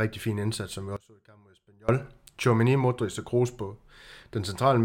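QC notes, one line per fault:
0.97–1.89 s, audio dropout to a faint residue: right after "fin indsats som vi" the speech cuts out abruptly for about 0.92 s. The gap is not silent but holds only a faint leak of the signal, roughly 25 dB below its normal level. Both the drop and the return are hard edges rather than a pause or fade, likely because the wanted feed was lost while the downstream path stayed live and passed residual leakage.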